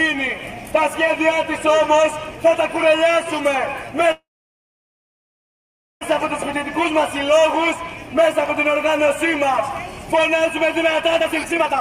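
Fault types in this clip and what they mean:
call audio freeze: From 4.11 to 6.03 s the sound stalls for about 1.9 s, most likely because packets were delayed. A brief fading tail gives way to near-silence, and playback resumes where it stopped, so unlike a dropout nothing is lost.
jitter buffer speed-up: From 11.2 to 11.8 s the audio runs at about 161% speed as the buffer trims roughly 0.4 s of pitch periods. Pitch stays unchanged, unlike a simple resampling speed-up.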